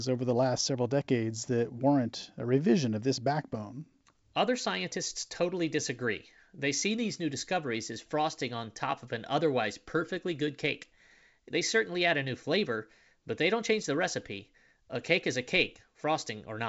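No technical faults can be heard in this speech, which comes through G.722 wideband telephone coding at 64 kbit/s.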